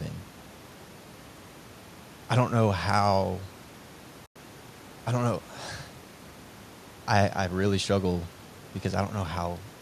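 At 4.26 s the speech drops into a soft-edged silence lasting about 0.1 s, ending at 4.36 s. This is AAC frame loss with muting: the decoder zeroed the missing frames' spectrum, so the overlapping windows fade out and back in. That span fits roughly ten short frames of the low-delay AAC coding the sound likely went through. On a spectrogram it appears as a full-band vertical gap with tapered edges, and the waveform thins to near-flat.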